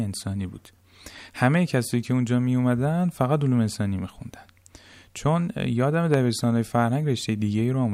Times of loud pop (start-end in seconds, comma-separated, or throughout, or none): 6.14-6.16